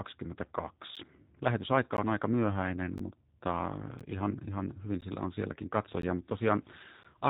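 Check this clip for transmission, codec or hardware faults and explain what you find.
Two faults are present: plainly audible speech-codec damage throughout and brief periodic dropouts.

A G.729 codec affects the whole speech clip. The codec models each 10 ms frame as a vocal tract filter plus a few pulses. Nothing passes above 3.8 kHz. The speech sounds muffled, rough and synthetic, consistent with an 8 kbit/s VoIP link.

A gap between chunks occurs at 0.96, 1.97, 2.98, 3.99, 5.01, 6.02 and 7.03 s. Each hole lasts about 13 ms and recurs every second. The one at 1.97 s falls just before "on aika myöhäinen mutta". The one at 2.98 s falls just after "on aika myöhäinen". The one at 6.02 s follows "hyvin sillä on sielläkin". Silence is inserted at each one-second chunk boundary. Nothing is lost, but each join is heard as a short hole.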